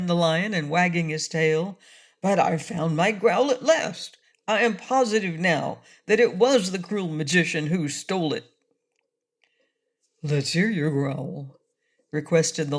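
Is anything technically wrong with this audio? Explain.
No, nothing technically wrong is audible anywhere in this audio.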